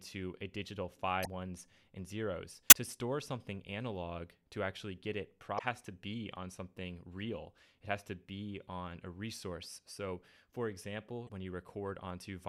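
At 1.22 to 1.27 s, 2.68 to 2.73 s, 5.55 to 5.61 s and 11.25 to 11.30 s, damaged data in the compressed stream makes the decoder misread frames and resync, giving brief glitches of about 50 ms each.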